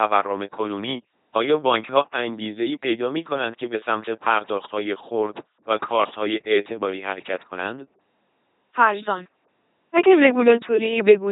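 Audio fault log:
throughout: LPC-10 vocoder. The speech has been rebuilt by a linear-prediction vocoder that keeps only a coarse vocal-tract filter and, for each moment, a single all-or-nothing choice between a pitched pulse train and noise. The damage is heavy, which fits the 2.4 kbit/s LPC-10 coder. Because the original waveform is thrown away, the voice turns buzzy and robotic, with stray buzz or hiss where voicing is misjudged, and nothing survives above 3.8 kHz.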